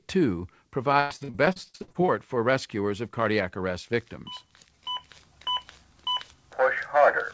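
From 1.0 to 2.1 s, repeated packet loss (robotic sound): rapid gaps up to 100 ms, each filled by stretching the last sound. It gives choppy stutter with pieces missing, not one silent dropout.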